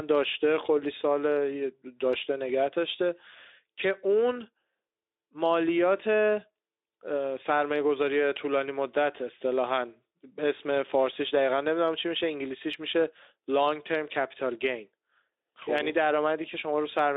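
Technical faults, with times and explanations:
No technical faults, with times and explanations, are present in this speech.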